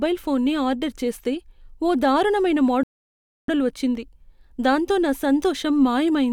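A rebuffering stall runs from 2.83 to 3.48 s, right after the speech reaches "ఆర్డర్ చేస్తే ఓ దారుణమైన". The player used up its stock of downloaded audio and had to halt until fresh data came in, so the speech drops into dead silence for 649 ms. When playback resumes, it picks up at exactly the point where it stopped. No speech is skipped or repeated; the gap simply adds that time to the clip.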